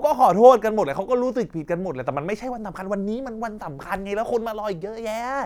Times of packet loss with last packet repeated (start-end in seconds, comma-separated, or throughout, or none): none